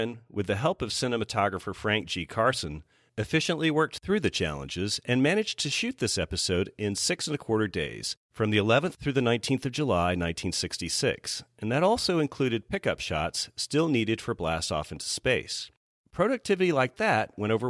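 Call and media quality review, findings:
No faults found in the speech audio on review; nothing to attribute to any component.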